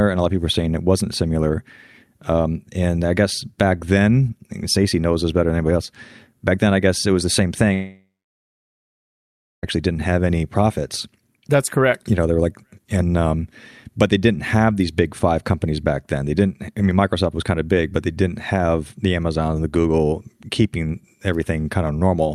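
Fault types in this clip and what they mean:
Long network dropout: from 7.73 s to 9.65 s the speech stops, and the last sound is held over as a fading buzz for about a third of a second before about 1.6 s of near silence; the speech resumes with roughly 1.9 s simply missing, which points to a likely loss of incoming packets. Unlike a brief packet glitch, the concealment runs out and gives way to silence, and the returning speech does not pick up where it left off.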